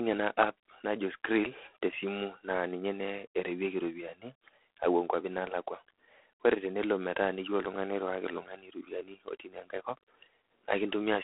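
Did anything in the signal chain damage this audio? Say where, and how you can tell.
Yes. Throughout, the speech carries a harsh, rasping hiss that rises and falls with its level, and nothing passes above about 3.8 kHz. This points to the codec stage: G.726 ADPCM at a low rate, which fits 24 kbit/s, coarsely quantising prediction differences.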